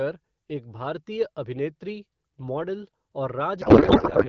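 At 3.61 s the sound turns to garbled noise and warble that barely tracks the speech, right through to the end. That's a codec payload misread: the AMR-WB frames are being unpacked with the wrong bit layout, which fits octet-aligned packets read as bandwidth-efficient.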